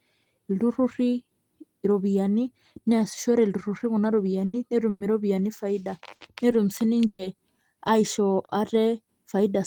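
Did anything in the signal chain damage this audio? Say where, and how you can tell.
Yes, in the network. Bursts of packet loss at 4.45 s (after "neasishore ilturrurri kuna"), 4.89, 6.15 and 7.07 s each give a held, fading fill, then the speech skips ahead.

At 8.45 s there's a short stall from a late packet. The jitter buffer ran dry, so the sound stretches about 40 ms, then resumes with nothing lost.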